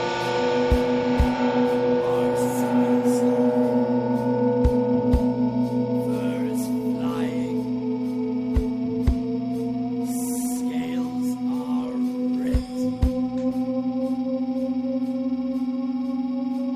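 No technical faults can be heard anywhere in this recording.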